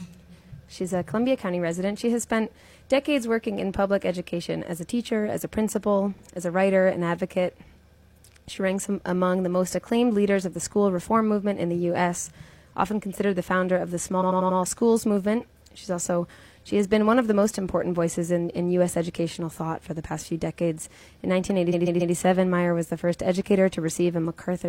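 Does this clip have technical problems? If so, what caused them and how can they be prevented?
Yes. Repeated frames: blocks of compressed audio were written or delivered more than once, so the decoder replays them, causing stutters. A 46 ms block plays twice at 6.13 s, a 93 ms block five times over 14.17 to 14.54 s, and a 139 ms block four times over 21.69 to 22.11 s. To prevent it, check frame sequence numbers and drop duplicates before decoding.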